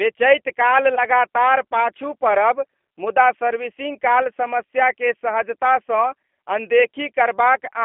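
The speech in this clip has passed through a G.729 codec for its whole length. The rough, slightly synthetic quality fits G.729A at 8 kbit/s, where the decoder rebuilds each 10 ms frame from a vocal tract filter, a pitch predictor and a few pulses rather than the real waveform. The line is narrowed to roughly 250 Hz to 3.5 kHz, so the sound is thin and muffled and lacks low body and upper detail. The coding damage is plainly audible as a rough, synthetic texture. At about 0.95 to 1.01 s there is VoIP packet loss concealed by the speech codec. About 20 ms of audio went missing, which fits two lost 10 ms frames. The decoder filled the gap by repeating its last pitch and filter settings at falling gain, so that stretch turns into a brief, smeared buzzy tone or coloured noise that fades. Because each frame builds on the one before, the sound stays weakened for a short time after the packets resume.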